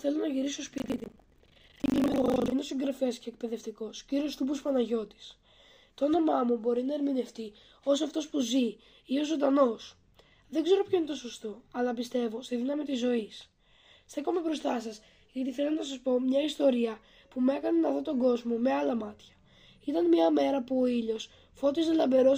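From 0.76 to 2.54 s there's buffer tearing: writer and playback pointer have slipped and cross every period, so roughly half of each buffer replays audio about a tenth of a second old. Those hard joins give a steady robotic rattle at 25 Hz.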